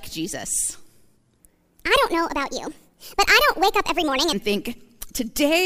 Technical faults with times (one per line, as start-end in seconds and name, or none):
1.40-4.33 section at the wrong speed